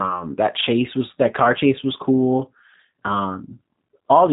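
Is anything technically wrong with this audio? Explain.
Yes. G.729 codec damage runs throughout the speech. The sound is rebuilt from a vocal-tract filter, a pitch predictor and a few pulses per short frame, which fits an 8 kbit/s stream. Nothing passes above 3.8 kHz, so it sounds muffled, rough and plainly synthetic.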